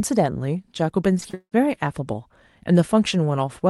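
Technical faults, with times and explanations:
1.17–1.54 s: repeated packet loss (robotic sound). The speech turns choppy as several gaps, the longest 190 ms, are patched by extending the preceding sound.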